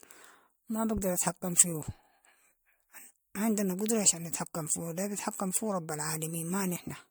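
Generation loss runs through the whole speech clip, which sounds swirly, smeared and hollow, with blurred onsets and nothing above 20.1 kHz. Its likely cause is about five successive MP3 encodes, each requantising on a shifted frame grid so that errors accumulate. The texture sounds worse than rates near 103 kbit/s alone would explain.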